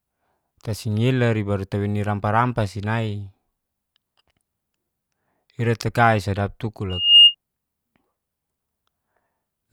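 Just after "ira takai sadap tuku", 6.89 to 7.35 s: loudspeaker feedback squeal. The microphone-loudspeaker loop exceeds unity gain at 2.8 kHz, and a piercing tone swells within about a third of a second to roughly 15 dB above the speech.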